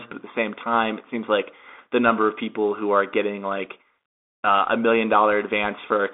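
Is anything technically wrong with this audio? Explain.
Yes. A Bluetooth CVSD headset codec affects the whole clip. Each sample is a single up-or-down bit with an adapting step, which fits a 64 kbps link. The speech is confined to 250 Hz to 3.6 kHz, with nothing above 3.8 kHz. Loud bright sounds distort, s sounds turn scratchy, and a granular hiss sits underneath.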